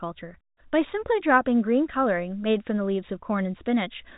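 This speech clip has nothing technically wrong with it.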